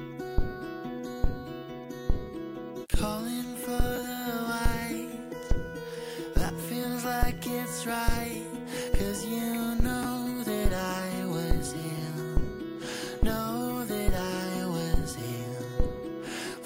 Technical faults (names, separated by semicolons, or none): chunks out of order